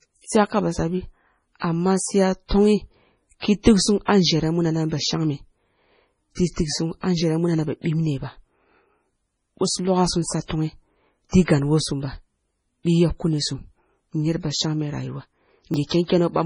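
MP3 compression runs through the whole speech clip: the treble is cut off, and sibilants turn watery and chirpy, which fits a likely starved encoder near 24 kbps.

A dropped buffer (overrun) at 15.74 s gives a jump as about 20 ms of audio goes missing, likely because samples were overwritten before being collected.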